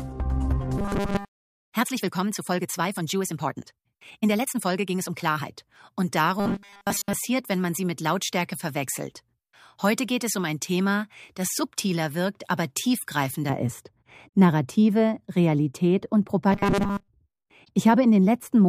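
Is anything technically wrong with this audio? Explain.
Yes, there are three separate problems here.

From the start to 5.5 s there's a time-stretched section. The audio runs about 1.47 times faster than normal, yet the pitch doesn't rise with it, so it comes across as choppy and rushed. That's likely from software squeezing the passage to fit a shorter length, holding the pitch steady by dropping short slices of the audio as it goes.

Then there's robotic sound from repeated short buffers, which shows up three times: 0.78 to 1.32 s, 6.40 to 7.14 s, and 16.52 to 17.08 s. Each stretch turns into a stiff, metallic buzz at 200 Hz that only loosely tracks the underlying sound. The likely cause is new audio arriving too slowly, so the playback keeps looping the last little chunk, which fits a 5 ms buffer. Most of the real audio in those spans gets skipped.

From 13.50 s to the end, de-emphasis is applied wrongly. 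A treble cut pulls the top end down smoothly, to about 11 dB lower at 10 kHz than at 1 kHz, so everything goes dull and muffled. It sounds like a filter meant to undo pre-emphasis was run on audio that never had any, or was run a second time.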